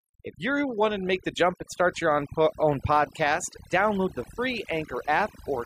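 Speech runs through the whole clip with overdone noise removal applied throughout: a noise reduction stage set far too hard has cut individual frequency bands whenever they sat close to its noise estimate, taking the quieter parts of the voice along with the background noise. In the pauses the background drops and breaks up into twinkling specks. Unlike a noise gate, which shuts everything at once, this thins the sound band by band, even during speech.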